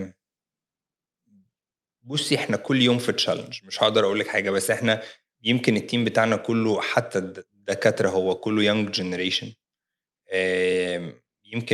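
No technical faults are audible.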